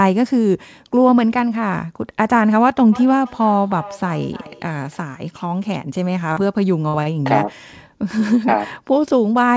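Feedback echo between two devices runs from 2.92 to 5.05 s. Two devices in the same room were joined to the call, and one played out what the other's microphone had sent. That microphone caught the playback and sent it round again, and neither echo canceller could remove sound played by the other device. The speech returns at a steady spacing of roughly 300 ms, about 18 dB below the direct voice at its loudest, each pass thinner and more ringing than the last.

Short concealed packet loss follows at 6.32 to 6.39 s. About 40 ms of the call never reached the decoder in time, so the receiver filled roughly 39 ms by carrying the preceding sound forward, from its pitch where it was voiced and as shaped noise where it was not, before blending back into the real signal. The result is a brief smear in the speech, and a short consonant can be swallowed in it.

A burst of packet loss at 6.88 to 7.02 s removes about 40 ms of speech. 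The receiver bridged it with 53 ms of continued sound, fading it as the gap went on, so the concealment runs 13 ms longer than what was lost. A voiced sound turns into a held, dulling buzz and unvoiced sound into a fading hiss. The speech then picks up further on, with the part in between gone.

A short stall from a late packet comes directly after, at 7.03 to 7.09 s. A packet was not there when it was due, the jitter buffer emptied, and the receiver stretched the last sound by 27 ms until the packet arrived, then continued from where it had stopped. Nothing is lost, but the playout runs 27 ms later from here, and one sound lingers too long with a faint buzz or dip. Throughout, the call path leaves nothing above 8 kHz, which fits a G.722 wideband codec.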